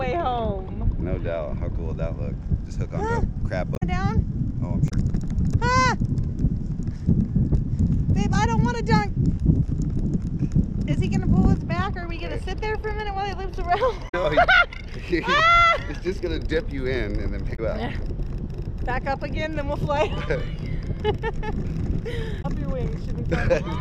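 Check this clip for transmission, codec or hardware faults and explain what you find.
The clip has one kind of fault: damaged data in a compressed stream, heard five times, at 3.72–3.83 s, 4.86–4.92 s, 14.05–14.15 s, 17.53–17.59 s and 22.38–22.45 s. Each lasts roughly 70 to 100 ms. Corrupted bytes make the decoder misread its frames and lose sync until it finds a valid header, producing a short chirp, squawk, click or hole. A spectrogram shows brief vertical smears of broadband energy unrelated to the surrounding content. The waveform shows abrupt discontinuities.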